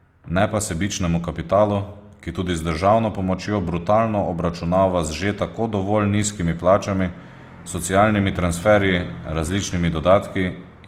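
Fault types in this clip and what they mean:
Opus compression: Throughout, the speech carries a grainy, rough, noisy texture. The encoder preserves each band's energy and fills starved bands with folded or noise content, so the sound stays dense instead of showing the swirling, watery holes of MP3. The top end remains fullband, without the hoarse, muffled narrowing of the speech mode, which suggests the music (CELT) mode at a low rate near 24 kbps, likely causing the plainly audible damage.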